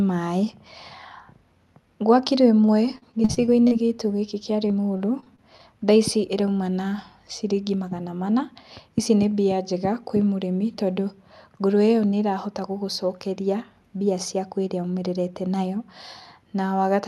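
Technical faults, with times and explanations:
2.95–3.73 s: repeated packet loss (robotic sound). Seven closely spaced gaps, the longest 37 ms, are each filled by extending the preceding audio, so about 21% of this stretch is synthetic. The sound turns choppy, with short fragments missing.
4.68–5.61 s: repeated packet loss (robotic sound). Six gaps, none longer than 22 ms, are again patched by repeating the last sound, concealing about 12% of the span. The gaps are fewer and shorter here, heard against the call codec's top end of about 12 kHz.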